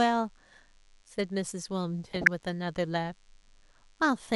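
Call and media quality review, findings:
DECT cordless phone buzz, throughout: nearby DECT handset or base bursting every 10 ms, rectified in the audio path. Thin, steady 100 Hz buzz with many harmonics, about 40 dB below the speech.

MP2 compression, throughout: likely MPEG Layer II at a low bitrate, dropping upper sub-bands and quantising the rest coarsely. Speech sounds dull, with plainly audible gurgling, granular distortion.

DAB burbling, 2.06 to 2.42 s: weak reception, with a small fraction of bit errors slipping past correction into the MP2 frames. Short blips of noise in single sub-bands across 16 frames, over the speech.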